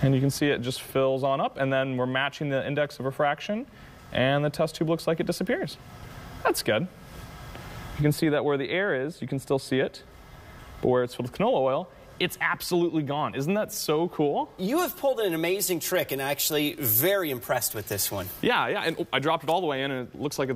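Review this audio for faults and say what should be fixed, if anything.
From 15.59 to 19.99 s there's pre-emphasis left on: the CD-style 50/15 µs treble boost never got its matching de-emphasis, so highs sit about 8 dB hot at 10 kHz, sounding thin and sizzly. To prevent it, check the emphasis flag on playback or transfer and make sure de-emphasis is applied whenever it's set.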